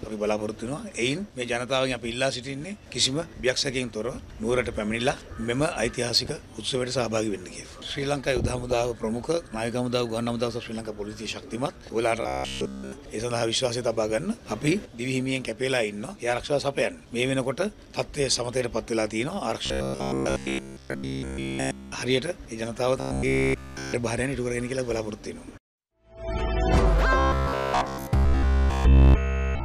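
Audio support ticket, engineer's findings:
Robotic sound from repeated short buffers at 12.22–12.92 s, 19.66–21.93 s, 23.00–23.93 s and 27.18–29.64 s. Rigid metallic buzz at 66.7 Hz, with essentially all of the sound replaced. This is likely a playback underrun looping a 15 ms buffer. The spectrogram shows a rigid comb of harmonics spaced 66.7 Hz apart, and the waveform shows identical cycles repeating every 15 ms.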